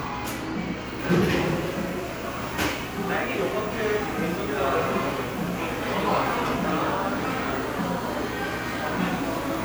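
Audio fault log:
No faults heard.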